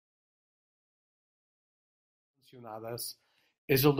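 There are no technical faults to describe in this speech clip.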